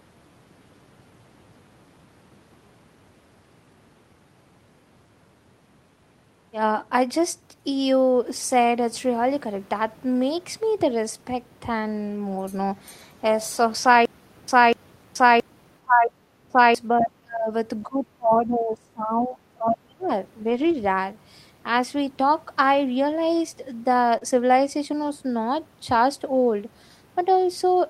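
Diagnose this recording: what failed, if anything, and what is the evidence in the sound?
Stutter with silent gaps, 14.05 to 16.75 s, playback or buffer stage. A 244 ms fragment plays again every 673 ms, with 429 ms of digital silence after each return, four times in all. This is likely a stalled stream replaying its last fragment at each retry, with the intervening audio lost.

Speech suppressed in double talk, call processing, at 15.81 to 16.11 s, 16.48 to 16.57 s, 16.93 to 17.5 s and 17.85 to 20.11 s. The speech level drops by roughly 20 to 30 dB, most deeply in the last two stretches. This is likely an echo canceller that could not separate the near talker from loudspeaker echo and attenuated both.

Lost packet rebuilt from error correction, codec and network, at 20.49 to 20.75 s, 24.21 to 24.23 s and 25.03 to 25.09 s. There is no gap, but these frames sound rougher and noisier. The decoder played low-bitrate copies carried in the following packets, and those copies lack the highest band.

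Short concealed packet loss, network, at 24.17 to 24.23 s. About 40 ms of audio never arrived in time, and roughly 34 ms of it was filled by extending the preceding sound before blending back. The result is a brief smear in the speech.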